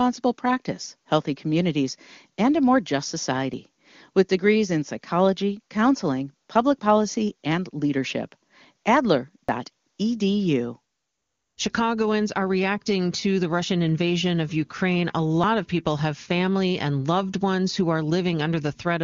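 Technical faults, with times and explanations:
3.54 s, 9.49 s and 15.44 s: audio missing between chunks. Roughly 50 ms vanishes each time, sides joined without silence, after "and a more just" and before "of people have family". The even 6 s spacing likely reflects chunked processing losing audio at each boundary.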